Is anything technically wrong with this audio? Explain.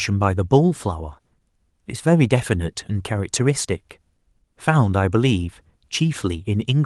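No, the speech signal comes through without any audible technical fault.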